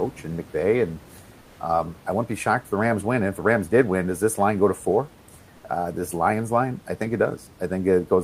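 From 1.41 to 1.59 s, just before "um I wouldn't be", the sender likely stopped transmitting during the pause, and the receiver filled those 180 ms with comfort noise in place of the background. The room noise becomes a flat, featureless hiss, about 3 dB quieter.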